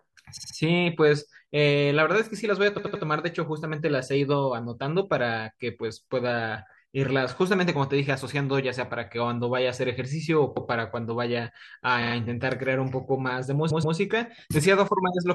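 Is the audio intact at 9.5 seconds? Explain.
Yes, the speech at 9.5 seconds plays through cleanly, with no dropout, click, distortion or other fault at that moment.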